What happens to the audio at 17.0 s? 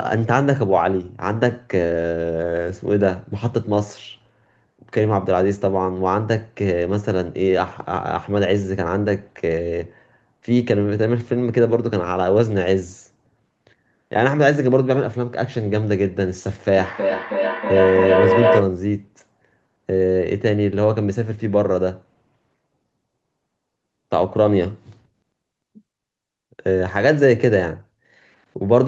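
A feedback howl runs from 16.73 to 18.79 s. The microphone picks up a loudspeaker in the same room, and each pass around the loop comes back louder. It swells into a tone near 500 Hz, with repeats roughly every 300 ms, and peaks about 2 dB above the speech.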